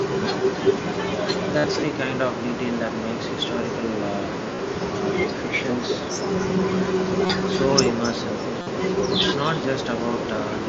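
A speech recording carried over a Bluetooth headset link, with the band limited to about 8 kHz and a faint graininess on louder passages typical of the mSBC headset codec. Throughout, there is echo with no canceller: every phrase is followed around 300 ms later by a fainter, thinner copy, roughly 18 dB below the direct speech. That pattern points to the far end playing the call through a loudspeaker, its microphone picking the sound back up, and nothing removing it before it returns. Separately, there are five bursts of concealed Bluetooth headset packet loss, where audio from the headset failed to arrive and the receiver filled the gap by repeating the closest-matching recent stretch of waveform. They fall at 1.59 to 1.64 s (52.5 ms), 4.55 to 4.59 s (37.5 ms), 6.14 s (15 ms), 7.26 to 7.30 s (30 ms) and 8.61 to 8.67 s (52.5 ms). They come through as a short buzzy held tone with a slight warble as real speech resumes. 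These lengths fit runs of two to seven consecutive 7.5 ms frames being dropped.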